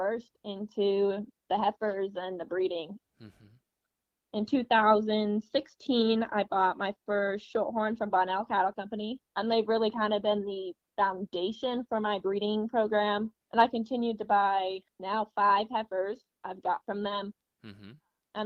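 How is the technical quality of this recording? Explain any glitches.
Nothing here needs explaining, as there aren't any glitches to be heard anywhere in the recording.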